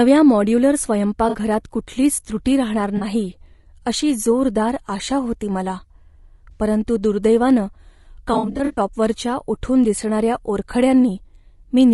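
This speech clip has rough, grainy low-delay AAC compression throughout, likely AAC-ELD at a rate that fits around 32 kbps, with noise filling the gaps between harmonics and a thin synthetic top band on the spectrogram. AAC frame loss with concealment causes smeared, noisy patches at 1.29–1.36 s (before "कुठलीच त्रुटी राहणार"), 2.97–3.03 s (after "कुठलीच त्रुटी राहणार") and 6.51–6.61 s (before "परंतु दुर्दैवानं"). A heavier stretch at 8.33–8.79 s loses about 240 ms in runs up to about 70 ms, showing as blurred, dipping spectral blocks.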